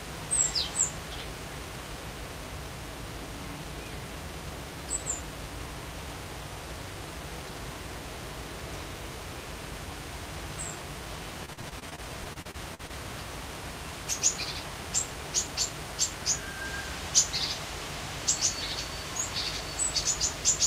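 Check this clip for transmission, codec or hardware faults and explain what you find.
One transmission fault stands out: repeated packet loss (robotic sound) from 11.45 to 12.91 s. Over that stretch the sound turns choppy and robotic, breaking up in a rapid string of a dozen or so brief gaps, the longest 45 ms. The receiver lost or received late a run of packets and papered over each hole by stretching the preceding sound. About 341 ms was filled this way, close to a quarter of the span, giving the mechanical texture.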